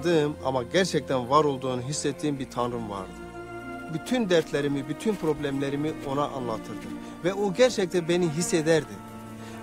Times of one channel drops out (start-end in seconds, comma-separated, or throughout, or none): none